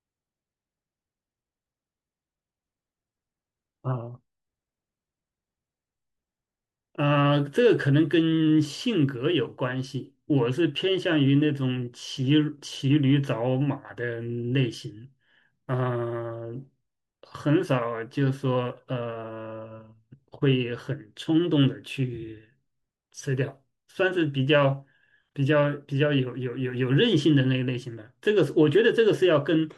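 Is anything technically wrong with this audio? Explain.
No, nothing technically wrong can be heard here.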